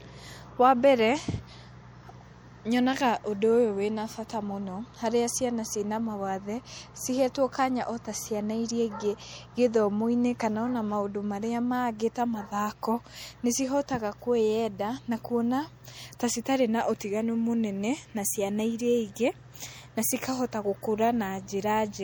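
Speech, with MP3 compression damage running through the whole clip. The artefacts are plainly audible from start to finish. The background has a watery, swirling texture as weak detail flickers in and out between frames. S sounds turn metallic and chirpy, and sharp onsets smear. The likely cause is a low-bitrate MP3 encode, and the level of damage fits roughly 64 kbps.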